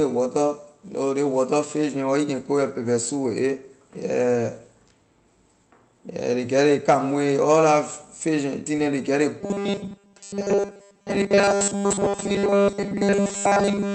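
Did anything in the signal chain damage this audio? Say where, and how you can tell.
Yes. From 9.41 s to the end, the speech becomes a rigid, metallic 200 Hz buzz, likely robotic sound from repeated short buffers, with the buffer stage looping 5 ms blocks.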